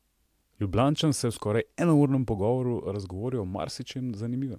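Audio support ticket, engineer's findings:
No faults found in this speech clip; nothing to report for the ticket.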